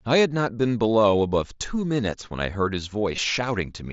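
Concealed Bluetooth headset packet loss at 3.16 s: roughly 15 ms of speech, consistent with a couple of dropped headset packets, was patched by repeating the closest-matching recent waveform. Carried over the 8 kHz-wide mSBC link, the repair is brief.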